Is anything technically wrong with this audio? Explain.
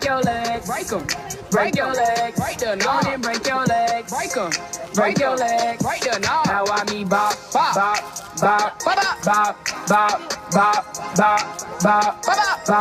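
Yes. From 3.01 to 6.33 s a hard, raspy buzz at about 217 Hz, rich in harmonics and unrelated to the sound, holds steady about 30 dB below the signal. This is GSM phone buzz: a nearby 2G phone on a call pulses its transmitter 217 times a second, and the audio circuitry rectifies those bursts.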